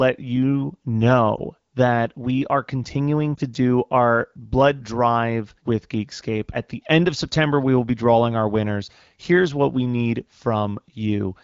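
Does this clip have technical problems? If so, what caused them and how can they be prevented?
Yes. Two brief dips come from lost AMR speech frames, at 1.36 to 1.41 s just before "that we are continuing", and at 3.36 to 3.41 s, before "do our blood drive". Each fits one lost 20 ms frame. The decoder bridged the gap by repeating its last pitch and vocal tract settings at lower gain. The result is a short warble in the wideband speech. A stronger radio link or better error protection would prevent it.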